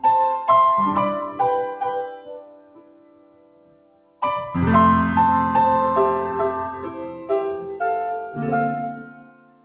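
A noise suppressor built for speech was left running on this material for the whole clip. It treats steady tones, ambience and decaying tails as noise and pulls them down, letting sharp onsets through. The result is a level that keeps pumping, with a swing of roughly 20 dB between what passes and what is held down. Sustained sound flutters and thins instead of holding steady. Everything sits below a hard ceiling near 4 kHz, which points to a G.711-style call codec at 64 kbps.

The longest sound cut by the noise suppressor runs from 2.07 to 4.22 s. For about two seconds the suppressor classes the held material as noise and drops it by up to about 18 dB, so it sags and hollows out while only transients poke through. A brief dip from 7.13 to 7.3 s, about 8 dB deep, clips a short stretch. From 8.93 s to the end the suppressor clamps down again by about 18 dB.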